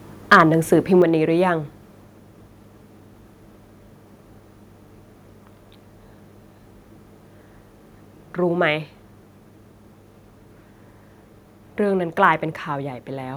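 From 0.32 to 0.41 s, microphone overload, likely from input gain set about 6 dB too high, flattens the tops of a few percent of samples, giving the speech a harsh, crackling edge. At 1.02 s, a microphone volume step-down, likely the call software cutting the input gain, drops the speech and background about 5 dB at once.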